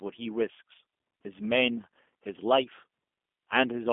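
From start to finish the speech carries G.729 codec damage consistent with an 8 kbit/s rebuild from a vocal tract filter, pitch predictor and sparse pulses. Unlike a plain telephone filter passing 250 Hz to 3.4 kHz, it sounds rough and synthetic, with nothing above 3.5 kHz.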